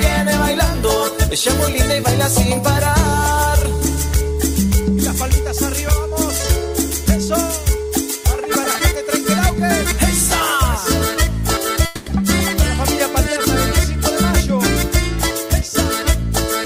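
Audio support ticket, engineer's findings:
Call audio freeze, 11.85–12.08 s: sound stalls and the last moment is stretched into a fading buzz for about 210 ms, then resumes exactly where it stopped. Nothing is lost; the stream is simply pushed about 210 ms later. Likely cause: late packets draining the jitter buffer, with the receiver's concealment bridging the gap. Unlike a packet-loss dropout, the following audio is intact and continuous, not clipped or skipped.

Jitter buffer speed-up, 15.48–15.70 s: audio briefly runs about 115% fast with pitch unchanged, sounding hurried. Around 40 ms is trimmed in small pitch-period slices as the receiver drains an overfull buffer, probably filled by delayed packets arriving together. Unlike a resampling or clock-drift error, pitch stays put and only tempo rises.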